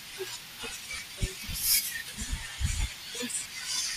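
At 0.96 to 0.98 s the speech briefly smears into a grainy blur, about 15 ms of lost LE Audio frames, which fits two 7.5 ms frames. The decoder covers the gap by repeating the last spectrum with scrambled phase. Between 3.39 and 3.46 s, scattered dropouts of up to about 20 ms produce a similar noisy smear. The light grain in the audio is likely LC3 coding.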